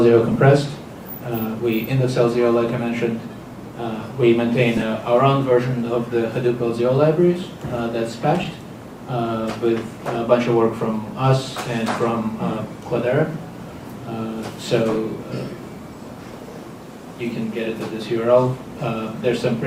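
Brief garbled flutters occur at 0.31, 4.77, 8.43 and 14.91 s, each about 40 to 50 ms: frames out of order, where neighbouring 20 ms frames swapped places, exchanging halves without losing time.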